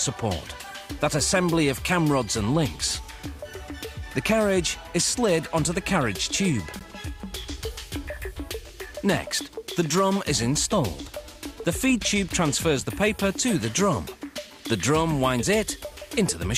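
The audio has one gap between stream segments at about 6.79 s: a short silent hole with hard edges, roughly 13 ms long. The timestamps on either side of a segment join don't meet, and the player fills the missing stretch with silence. Nothing is removed; the sound simply resumes slightly later. The stream is cut into segments of about 2 s, though only this one join shows the fault.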